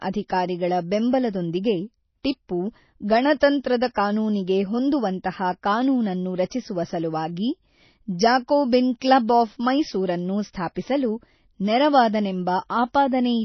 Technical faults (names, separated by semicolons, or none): MP3 compression